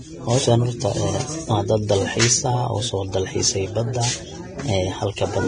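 Heavy Vorbis compression is the likely cause throughout: the encoder, starved of bits at what sounds like a rate near 23 kbps, cuts everything above 9.7 kHz and quantises the remaining treble into noise, so the speech sounds hissy and grainy with blurred consonant attacks.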